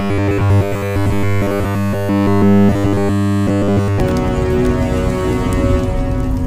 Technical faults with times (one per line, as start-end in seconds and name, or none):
0.01-4.00 robotic sound from repeated short buffers